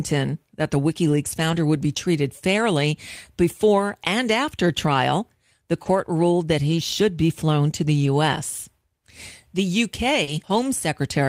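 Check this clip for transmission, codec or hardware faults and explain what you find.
The speech shows two network-related faults: stretches rebuilt from forward error correction, and two short concealed packet losses.

Lost packets rebuilt from error correction occur at 1.03–1.57 s, 4.85 s, 5.85 s, 8.01–8.07 s and 10.27–10.65 s. The decoder replayed low-bitrate copies carried in the following packets, so nothing drops out. The 280 ms and 200 ms stretches sound rougher and noisier.

Short concealed packet loss occurs at 5.83–5.87 s and 10.23–10.29 s. Audio arrived too late, and the receiver extrapolated from the preceding sound before blending back, producing a brief smear or wobble. The second gap runs straight into a rebuilt stretch.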